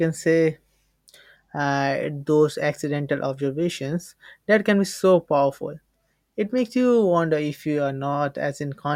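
No faults are audible anywhere in this speech recording.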